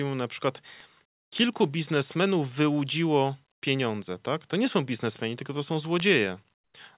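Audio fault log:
0.80 s, 5.16 s, 6.00 s: bit error spike. A single corrupted sample at 0.80 s and at 5.16 s (between "nie są" and "tylko to są"), and three in a row at 6.00 s just after "tylko to są", each jump by a power of two and snap back, giving an isolated sharp tick. On the waveform it is a one- or three-sample needle. On the spectrogram it is a thin vertical line running up to the 4 kHz ceiling of the G.711 call path.
1.06–1.32 s, 3.52–3.62 s, 6.54–6.74 s: comfort noise in place of the background. The first gap sits between "mu na przykład" and "kilku biznesmenów wyłudziło pieniądze". For 260 ms, 100 ms and 200 ms the real background gives way to a smooth, featureless hiss, which is likely discontinuous transmission filling pauses with synthetic noise. The level drops by about 22 dB, 22 dB and 16 dB. The spectrogram shows darker, evenly textured blocks.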